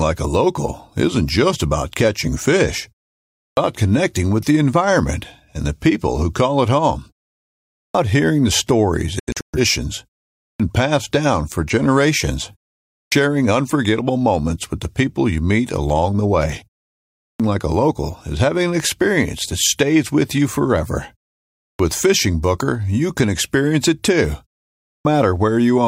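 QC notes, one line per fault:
3.35, 7.69, 10.35, 12.87, 17.14, 21.57 and 24.79 s: clipped start after a pause. Each time speech resumes after a gap of 0.35 to 0.65 s, the first 220 to 260 ms are missing, so the onset arrives abruptly out of silence with its opening sounds gone. The output device appears to drop into a sleep state during the quiet and needs roughly a quarter second to wake and relock. Audio sent during that window is never reproduced.
9.20 to 9.59 s: digital broadcast dropout. The speech breaks into several short silent holes spread over about 341 ms, with 256 ms lost in total and the longest single gap 128 ms. The pattern points to the receiver losing a handful of frames, roughly six, that failed their checks. It muted each bad frame and resumed on the next good one. The program content from those gaps does not come back.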